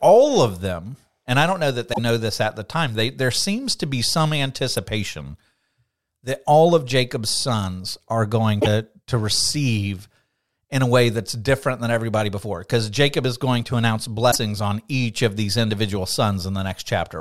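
Damaged data in the compressed stream causes short glitches at 1.90–1.99 s after "I don't know that", at 4.77 s, at 8.58–8.67 s, and at 14.28–14.36 s, as the decoder loses sync.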